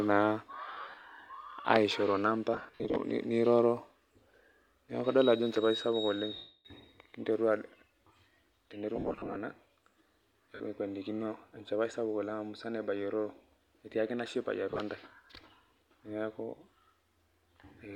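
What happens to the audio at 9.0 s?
Between 8.96 and 9.36 s, lost LE Audio frames break up the speech. About 280 ms of audio goes missing, scattered across that 400 ms stretch in short runs, the longest roughly 70 ms. For each gap, the LC3 decoder repeats the previous spectrum with randomised signs, so voiced sound turns into a hissy, noisy smear. On a spectrogram, harmonic lines dissolve into diffuse vertical patches, and the waveform shows rough, noise-like bursts.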